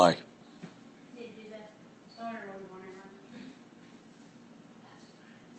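Speech carried over a call path with an audio band that stops around 8 kHz, as expected for a wideband call codec, and no technical faults are present.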